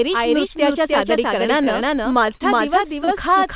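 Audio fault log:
throughout  doubled audio track: a full-band copy at about equal level trails roughly 300 ms behind, likely from a second capture path; the waveform repeats each envelope without decay.
1.64–1.69 s, 2.35–2.42 s, 3.04–3.09 s  short stall from a late packet: the jitter buffer ran dry and the last sound was held 22, 50 and 30 ms; the spectrogram shows flat, smeared frames.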